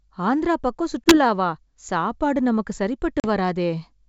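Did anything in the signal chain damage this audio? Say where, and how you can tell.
Yes. Packet loss on an ADPCM call hit the network stage twice. A gap of about 20 ms, roughly one packet's worth, follows "ஆந்திரா பக்கம்" (1.04 to 1.17 s), and a 40 ms gap, around two packets, follows "சாப்பாடு நமக்கு" (3.20 to 3.27 s). Each lost stretch was filled with silence. The receiver's adaptive predictor and step size then no longer matched the sender's, so the speech returns after each hard-edged hole slightly distorted before settling. The G.722 wideband coding itself stays clean.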